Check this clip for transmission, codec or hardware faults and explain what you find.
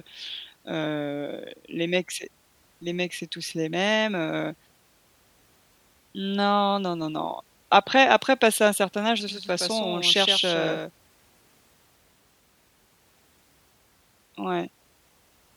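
There's one fault here, a doubled audio track, running from 9.28 s to 10.90 s. For that stretch the speech is mixed in twice: a second full-band copy trails about a tenth of a second behind, only a few dB quieter. It's most likely a second capture through a slower path, or an edit leaving two copies out of step. It sounds like a dry slapback with no room tail, and it switches on and off abruptly.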